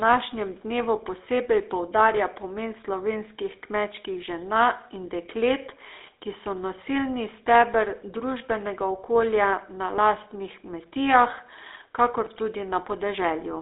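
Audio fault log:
throughout, GSM full-rate codec: the speech has passed through the original GSM full-rate coder, consistent with a 13 kbps rate, which rebuilds the signal from a vocal-tract model excited by a sparse, regular pulse train. That thinned-out excitation gives the voice a plainly audible buzzy, gravelly roughness. The phone-line band also confines the sound to roughly 300 Hz to 3.7 kHz, with nothing above 3.8 kHz, so it sounds narrow and muffled.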